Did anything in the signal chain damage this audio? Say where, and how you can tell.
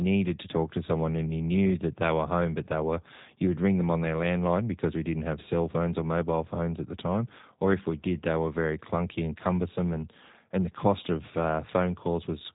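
Yes, at the codec stage: the speech was carried through a G.729 codec, whose roughness points to an 8 kbit/s G.729A link. It rebuilds speech from a vocal tract filter, pitch predictor and a few pulses per frame, so the sound is plainly rough and synthetic throughout, with nothing above 3.8 kHz.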